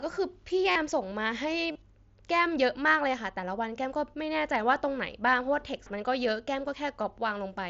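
Concealed Bluetooth headset packet loss occurs at 0.71 s for about 45 ms and again at 1.71 s for about 38 ms. Each time, headset-to-phone packets went missing and the receiver filled the hole by repeating the closest-matching recent stretch of waveform. That produces a short buzzy, steady tone at full level with a slight warble as real audio resumes, unlike a dropout, which falls to silence.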